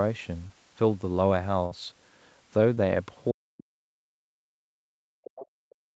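At 0.47 to 0.51 s and again at 2.75 to 2.79 s, short concealed packet loss leaves a brief smear. About 20 ms went missing each time, and the receiver bridged it by continuing the preceding sound.

From 1.65 to 1.73 s, a burst of packet loss drops about 60 ms. The decoder extends the last sound, fading it, then jumps ahead.

From 3.31 to 4.74 s, the speech dips and breaks up for about a second in total, falling as much as about 40 dB. This is likely speech suppressed in double talk, with the echo canceller ducking the talker.

Within that stretch, at 3.57 to 3.63 s, a faint second voice comes through at around 25 dB below the speech. This is likely the other side's voice leaking through from the loudspeaker.

From 5.08 s to the end, the speech again drops sharply, by up to about 40 dB. This is likely another case of double-talk suppression.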